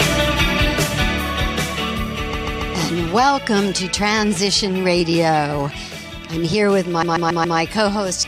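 From 2.32 to 2.74 s, then 7.01 to 7.57 s, repeated frames: a 139 ms block, consistent with six compressed frames, plays three extra times, then four, giving a mechanical stutter and lengthening the sound by about 0.42 s and 0.56 s.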